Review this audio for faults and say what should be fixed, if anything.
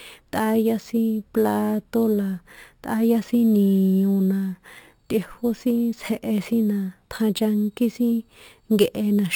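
Imaging from sample-and-hold upsampling runs through the whole speech clip. The sound was raised to a higher rate, most likely from 12 kHz, by repeating samples without an interpolation filter. Mirrored spectrum copies appear between 6 and 12 kHz at about −24 dB, heard as a metallic fizz tracking the voice and moving against its pitch. To prevent it, resample with a proper band-limited interpolation filter rather than sample repetition.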